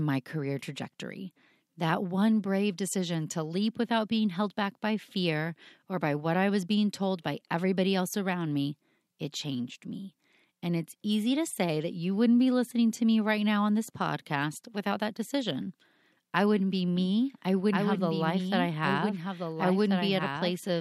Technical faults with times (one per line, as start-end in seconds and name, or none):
16.96-20.81 doubled audio track